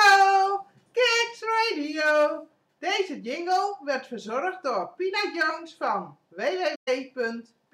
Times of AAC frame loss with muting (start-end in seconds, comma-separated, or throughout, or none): 6.75-6.88